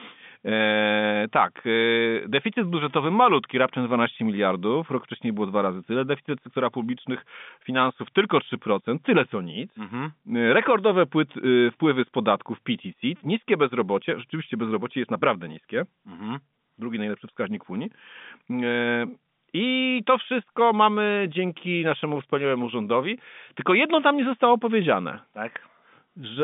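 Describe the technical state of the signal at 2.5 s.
At 2.5 s the audio is intact, carried over G.711 telephone coding with its narrow line band of roughly 150 Hz to 3.6 kHz.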